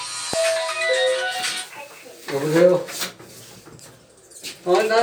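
At 0.33 to 0.36 s a single loud pop, roughly 10 dB above the sound, likely from a plug or switch transient, shows as a sharp waveform spike and full-height vertical spectrogram stripe.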